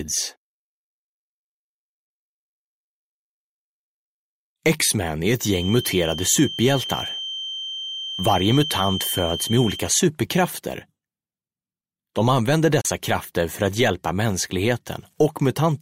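A thin, steady whistle near 3.1 kHz sits behind the audio from 5.43 to 9.89 s, around 10 dB below the main sound and swelling and fading slowly in level. This is a feedback whistle, likely from a loudspeaker-to-microphone loop held just at the edge of feedback, so one frequency rings on without building up. At 12.81 to 12.85 s the sound snaps to silence with a very quick fade of about 3 ms, leaving a gap of roughly 32 ms. That digital broadcast dropout fits a single corrupted or missing frame, during which the receiver muted and that stretch of audio was lost.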